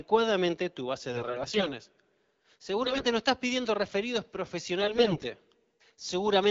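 Bit errors hit the AMR-WB stream in bursts at 1.12 to 1.71 s, 2.84 to 3.06 s and 4.79 to 5.25 s, corrupting a heavy share of the weaker-protected bits. Misplaced excitation pulses and skewed gain and spectral values turn the speech hoarse and gargly while its pitch and level roughly hold.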